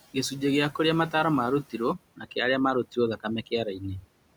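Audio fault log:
0.01–0.15 s, 1.63–1.8 s (just after "kĩa kũrĩa mataaro") and 2.16–2.33 s: speech cut by the noise suppressor. The suppressor mistook quiet speech for the room noise, which sits about 18 to 21 dB below the speech. It pulled each passage down by about 15 to 16 dB for roughly a tenth of a second, so those sounds come out swallowed and faint.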